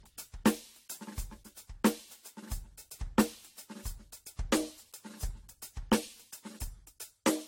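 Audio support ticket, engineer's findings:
Music, swirly and hollow from start to end, attacks smeared, top end empty above 16.6 kHz. Generation loss, likely from repeated AAC-LC encoding, roughly five passes, consistent with a 64 kbit/s chain. Each decode and re-encode quantises again on a shifted frame grid, so noise and spectral holes stack up beyond what one pass at that rate leaves.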